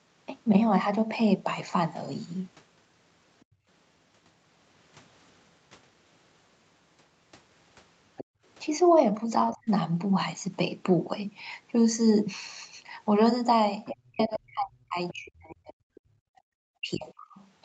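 At 3.44 to 3.67 s the echo canceller clamped the microphone, so the background was gated: room sound drops by about 32 dB for a fifth of a second, then returns. At 8.17 to 8.24 s, likely incomplete echo cancellation lets the other side's voice leak through, a faint scrap about 20 dB under the speech, and the gate closes again from 8.24 to 8.43 s, cutting the background by about 31 dB. From 9.48 to 9.57 s another quiet fragment of the far voice leaks in, and at 9.53 to 9.69 s the talker's speech is suppressed in double talk, dipping by roughly 30 dB, likely because the canceller could not separate it from the loudspeaker echo. The longest overlap runs from 13.85 to 16.0 s, with the other side's voice leaking through much louder, about 10 dB under the speech. The talker's speech is suppressed from 13.92 to 17.39 s, dropping by up to about 40 dB. A brief background gate at 16.18 to 16.26 s pulls the room sound down by about 39 dB for about 70 ms.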